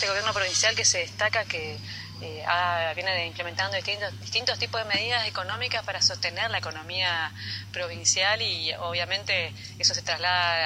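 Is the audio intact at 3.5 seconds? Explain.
No. At 3.5 seconds, as throughout, there is low bit depth without dither: grainy distortion that tracks the sound and grows gritty in quiet passages, sitting roughly 40 dB below the signal. It likely comes from rounding to about 9 bits with no dither.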